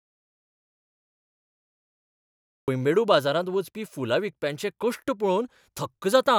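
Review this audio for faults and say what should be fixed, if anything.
From the start to 2.68 s there is an audio dropout to silence: silence with no room tone, unlike a gate's residual hiss, likely from a lost input. Secure cables and mutes, and watch input meters while recording.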